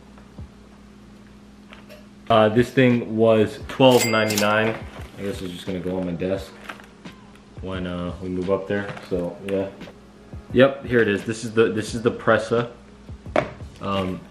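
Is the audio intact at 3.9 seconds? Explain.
Yes, at 3.9 seconds the audio plays through intact, with no dropout, click, distortion or other fault at that point.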